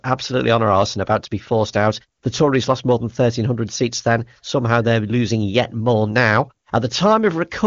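Listening to this speech clip, nothing stood out as a technical problem.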